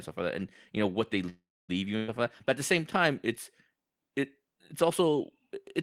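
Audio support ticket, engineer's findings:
Call audio freeze, 1.29–1.71 s. Sound stalls, held tail fading to silence for about 0.27 s. Likely jitter buffer underrun from delayed packets. Resumes where it stopped, nothing lost, playback now about 0.39 s later.

Burst of packet loss, 1.97–2.10 s. Brief held buzz or hiss, turned down, about 0.11 s. Receiver concealment across lost packets. About 0.12 s of audio skipped on resume.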